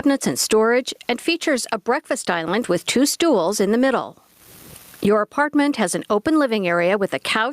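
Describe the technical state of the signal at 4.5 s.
At 4.5 s the speech shows gain pumping, present throughout the clip, a gain swing of around 25 dB, likely from excessive input gain with a fast limiter. The waveform looks flattened.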